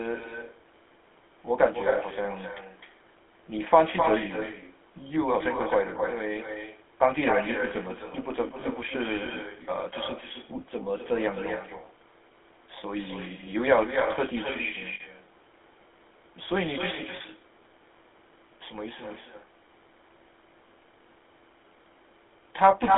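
Echo with no canceller, heard throughout: the far end's loudspeaker feeds its microphone and nothing removes the pickup, so every phrase returns roughly a third of a second later, about 10 dB quieter, as a thin shadow trailing the speech.

GSM full-rate codec, also throughout: the speech is rebuilt from a vocal-tract model excited by sparse, regularly spaced pulses, which fits the 13 kbit/s full-rate coder. The band runs from 300 Hz to 3.5 kHz, and the buzzy, gravelly roughness is plainly audible.

Lost GSM frames at 8.60–8.64 s, 10.28–10.31 s, 14.94–15.01 s and 17.16–17.22 s: the decoder repeats the last good frame's settings, with the level falling from the second lost frame on, so each gap becomes a brief rough, metallic ring. The 14.94 s event, consistent with about three missing frames, rings longest.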